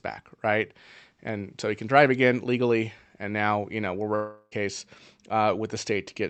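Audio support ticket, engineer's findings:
Long network dropout, likely: audio flow stops 4.15–4.53 s, right after "now you know we're". Receiver conceals about 360 ms by extending the last sound into a fading buzz, then brief silence near 4.5 s. Speech resumes with the lost section gone. Call path Opus, upper band capped near 8 kHz.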